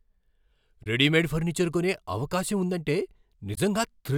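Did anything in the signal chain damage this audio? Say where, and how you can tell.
Yes. At the codec or storage stage, damaged data in a compressed stream causes brief glitches, heard as a chirp, squawk, click or short hole, at 0.83 to 0.87 s and 3.54 to 3.58 s. The decoder misreads corrupted frames and resyncs.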